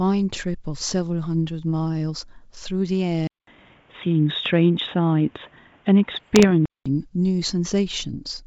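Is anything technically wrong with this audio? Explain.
Yes, two faults are audible in this speech clip.

From 3.27 s to 6.86 s the sound turns dull and narrow, with nothing above 3.8 kHz. The most likely cause is that the input switched to a poorer device mid-recording, such as a different microphone or a headset's call profile. About 200 ms of silence marks the switch. After it, the level shifts by about 5 dB and a new background noise sits about 40 dB below the signal. The full band returns at 6.86 s.

From 6.17 s to 6.45 s there are bit errors on the ADPCM link. The link's G.722 coding, which at 64 kbit/s leaves at most faint coding damage, predicts each sample from the ones before and adapts its step size as it goes. A flipped bit corrupts both, so each error rings on for a few milliseconds before the decoder recovers. The result is a cluster of pops and rough bursts with brief level jumps, a pattern that points to an error rate under half a percent across roughly fifteen frames.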